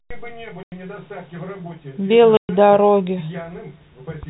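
At 0.63 to 0.72 s and 2.37 to 2.49 s, packet loss filled with silence cuts 90 ms and 120 ms holes, consistent with 30 ms packets. They have hard edges and show as flat waveform gaps and blank spectrogram columns within telephone-band speech.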